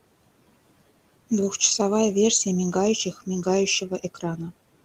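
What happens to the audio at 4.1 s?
At 4.1 s the sound falls inside a stretch of speech cut by the noise suppressor, running from 3.9 to 4.39 s. The suppressor mistook quiet parts of the speech for the room noise, which sits about 21 dB below the speech, and pulled them down by up to about 9 dB, roughly a tenth of a second in all. Those parts sound swallowed and faint. On a waveform the envelope dips, and a spectrogram shows soft energy thinned out into the background floor.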